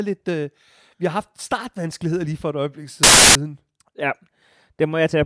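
At 3.03 s, right after "lige for et øjeblik", the speech is cut by about 0.32 s of file tags played as audio. The compressed bytes of an embedded cover picture were decoded as samples, producing very loud white noise with abrupt start and stop edges until 3.35 s.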